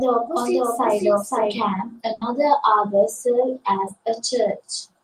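From the start to 1.58 s a doubled audio track is heard: a full-band copy sits about half a second behind, roughly 5 dB quieter, likely from a second, slower capture path. At 2.13–2.23 s a burst of packet loss occurs; about 80 ms is filled by a fading continuation of the last sound, and 80 ms of speech is skipped.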